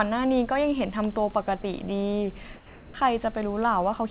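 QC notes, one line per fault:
1.62–1.64 s, sound dropped by the voice detector: the sender's voice detector likely judged a brief stretch of sound to be background and stopped transmitting for about 20 ms. The receiver filled the gap with comfort noise, so a short sliver of the speech is swapped for flat synthetic hiss before the real signal resumes.
2.56–2.94 s, comfort noise in place of the background: during this 0.38 s pause the sender likely went into discontinuous transmission, sending no audio. The receiver played synthetic noise shaped to match the background, which sits about 21 dB below the loud parts. The level matches the real background, so there is no drop in loudness, but the background's natural texture gives way to a smooth, featureless hiss until the real background returns. Like the rest of the clip, the filler stops at 4 kHz, consistent with G.711 A-law.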